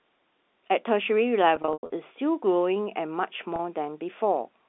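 From 1.56 to 1.92 s the sound turns buzzy and stuttering, with held fragments that fade to brief silences before resuming, and a shorter held buzz follows from 3.56 to 3.59 s. This is packet loss with pitch repetition: about 220 ms went missing across that first 360 ms stretch, the longest gap 100 ms, and the receiver looped the last pitch period to fill each gap, fading it away once the gap outlasted the concealment.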